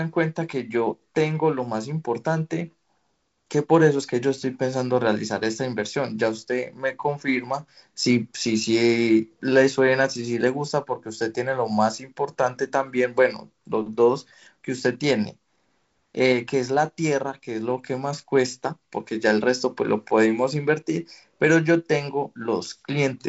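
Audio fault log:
No faults heard anywhere in this speech recording.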